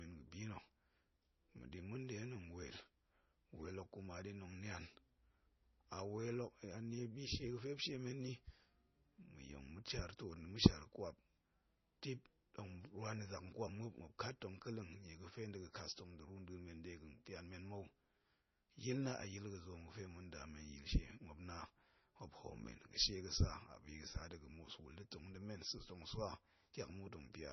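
Throughout, the speech loses everything above 6 kHz and turns watery and swirly, with chirpy s sounds and smeared onsets. That is likely heavy MP3 compression, at a bitrate near 24 kbps. A spectrogram shows a hard ceiling at 6 kHz with flickering holes beneath it.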